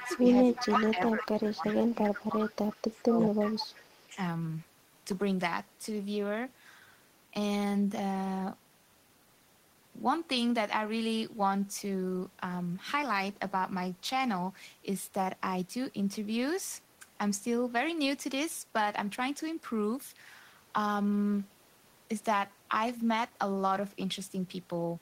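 From 0.0 to 1.88 s, an echo leak is heard: an echo canceller likely failed to remove all of the loudspeaker sound its microphone picked up, so a copy of the voice returns about 360 ms late, roughly 15 dB below the direct speech. At the same moments, the canceller likely could not tell near speech from echo during double talk, so it turned both down. The result is speech suppressed in double talk: a dip of about 15 dB from 0.0 to 0.2 s, then a longer, deeper one of around 20 dB spread across 0.64 to 2.53 s, during which the voice sinks for well over a second. The echo leak returns from 2.63 to 4.09 s with the same 360 ms lag, now about 20 dB down. Within it, the suppression strikes hardest, roughly 25 dB, from 2.95 to 3.16 s. A last brief, shallow dip of about 5 dB follows at 4.1 to 4.16 s.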